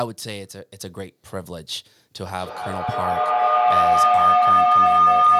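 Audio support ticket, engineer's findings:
Rising tonal howl from 2.34 s to clip end at 5.39 s, peaking about 14 dB over speech, near 1 kHz, pulsing roughly every fifth of a second. Feedback howl: two devices sharing a room and call, mic-to-speaker loop gaining level each pass.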